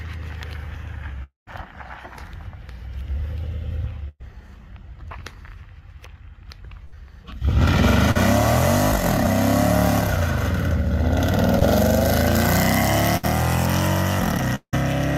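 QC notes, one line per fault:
1.23–1.49 s, long network dropout: the sound turns into a fading buzz or hiss, then about 150 ms of silence, and resumes further on. This is likely a network stall that left roughly 240 ms of audio missing.
4.09–4.22 s and 6.85–6.96 s, burst of packet loss: the sound holds and fades briefly, then jumps ahead. Runs of lost packets removed about 120 ms and 80 ms, patched by continuing the last sound.
8.11–8.17 s, short concealed packet loss: a brief smear or wobble. About 40 ms never arrived in time and was filled by extending the preceding sound before blending back.
11.59–14.75 s, repeated packet loss (robotic sound): choppy patches with pieces missing. Three separate gaps, the longest 174 ms, lost about 260 ms in total, each bridged by continuing the last sound.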